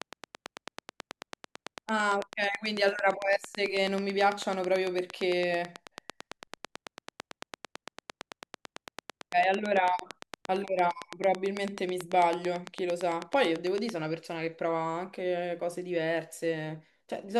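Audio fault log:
0.02–13.9 s, train of clicks: a steady ticking at about 9 clicks per second, around 150 in all, each with much the same sharp shape and peaking roughly 15 dB above the speech, audible through pauses too. The likely cause is electrical interference or a faulty connection or power supply.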